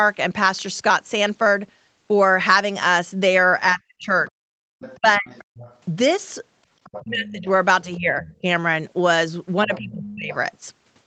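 It's a speech recording from a call, with the top end stopping around 8 kHz, which fits an Opus call path at roughly 20 kbps. The main problem is speech suppressed in double talk: the talker's voice sinks sharply at 3.72–4.43 s (the deepest dip, roughly 40 dB), again at 4.97–5.28 s (about 30 dB), through 7.04–8.45 s (about 20 dB) and at 9.65–10.32 s (about 25 dB), in short chopped stretches rather than one continuous gap. That's likely the echo canceller failing to tell the near talker from its own loudspeaker echo while both sides spoke, so it ducked everything. Alongside that, you hear the other side's voice leaking through at 4.27–5.78 s, 6.84–7.31 s, 8.23–8.36 s and 9.74–10.35 s. It sits roughly 15 to 25 dB under the talker, loudest around 7 s, and comes across as a faint second voice. It's likely loudspeaker playback the canceller didn't fully remove from the mic, and it overlaps the ducked spots, which fits the double-talk picture.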